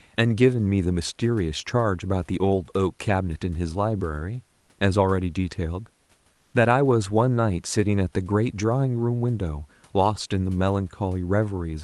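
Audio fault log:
6.33–6.53 s, comfort noise in place of the background: for 0.2 s the room background becomes a smooth, featureless hiss about 1 dB quieter, likely from Opus discontinuous transmission pausing the sender. On a spectrogram the textured floor, about 45 dB down, turns into an even band. The waveform shows uniform low fuzz.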